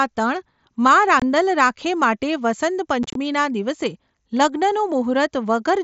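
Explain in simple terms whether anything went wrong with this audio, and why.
Around 1.20 to 1.22 s the speech has a tiny, abruptly cut gap, and from 3.03 to 3.16 s it turns briefly choppy and crackly. That's unconcealed Bluetooth headset packet loss: short scraps of audio between headset and phone went missing, with nothing filling in.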